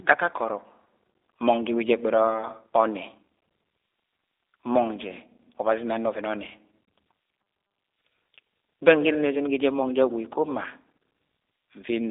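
From start to finish the speech carries the sound of the G.729 codec, running in its G.729A form at 8 kbit/s. The coder keeps only a vocal tract filter, a pitch predictor and a few pulses per 10 ms frame, so the speech comes out rough and faintly synthetic. On a spectrogram the energy is confined to a telephone band of roughly 300 Hz to 3.7 kHz, with nothing above 3.8 kHz and a hard empty ceiling across the whole clip.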